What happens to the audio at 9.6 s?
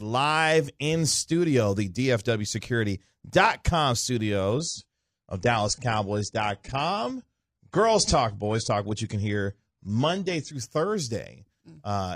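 At 9.6 s the speech sits inside a stretch of adaptive stream at a lower bitrate, from 4.51 to 10.51 s. The player switched seamlessly to a leaner encode, which sounds like roughly 32 kbit/s AAC: treble vanishes above 10.1 kHz, a flat spectrogram ceiling, with smeared, swirly artefacts.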